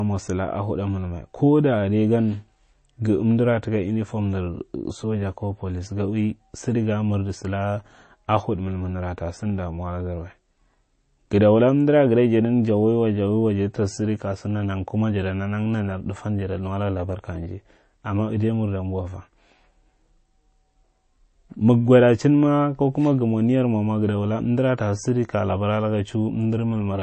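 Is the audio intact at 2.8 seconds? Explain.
No. At 2.8 seconds, as throughout the whole clip, the speech sounds watery and swirly, with the s sounds turning chirpy and metallic and consonant attacks smeared, while nothing survives above 8.3 kHz. This is likely MP3 compression at a rate that fits a 32 kbps encode: starved of bits, the encoder cuts the treble at a fixed frequency and drops weak frequency lines that flicker on and off between frames.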